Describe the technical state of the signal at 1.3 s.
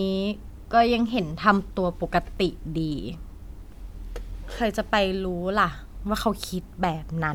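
At 1.3 s the speech signal is intact, with no audible technical fault at that moment.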